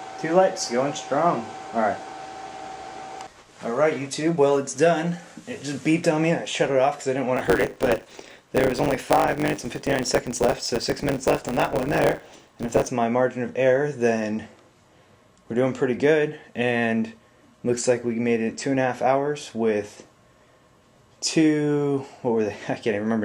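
From 7.36 to 12.88 s a 100 Hz buzz appears and the sound runs about 1.09 times fast with its timbre kept: a block size mismatch (truncated), discarding each block's tail.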